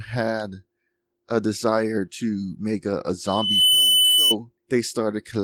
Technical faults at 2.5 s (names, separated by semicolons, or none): none